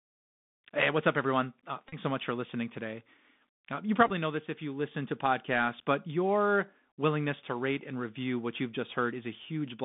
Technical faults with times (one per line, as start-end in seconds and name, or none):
0.00-9.84 Bluetooth CVSD headset codec
1.89-1.96 Bluetooth headset packet repeated
4.07-4.11 Bluetooth headset packet repeated